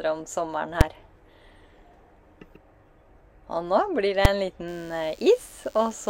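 Invalid numbers at full scale strike at 0.81 s and again at 4.25 s: a calculation produced infinite or invalid values that were clamped to the extreme sample value, pinning the output for a block of about 5 ms. Each is heard as a single sharp bang.

DECT cordless phone buzz begins at 4.67 s and runs to the end. A nearby DECT handset or base emits radio bursts 100 times per second, which the audio circuitry rectifies into a thin, harmonically rich 100 Hz buzz sitting roughly 30 dB below the main sound.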